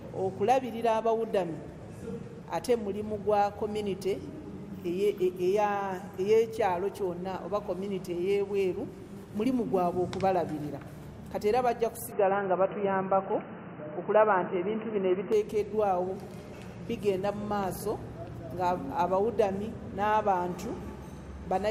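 From 12.12 to 15.32 s the sound turns abruptly dull and boxy, with nothing above 3 kHz, a level shift of around 5 dB and a new noise floor well below the signal. This is most likely an input switched to a poorer device, with no gap at the changeover.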